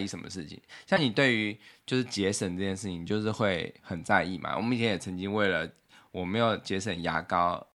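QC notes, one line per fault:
0.96 to 0.99 s, broken MP3 bit reservoir: the audio jumps ahead, and the 30 ms after the cut, about one 26.1 ms frame, comes out damaged. Likely cause: frames were dropped, so the next frame borrowed reservoir bytes belonging to a different frame and decoded garbage.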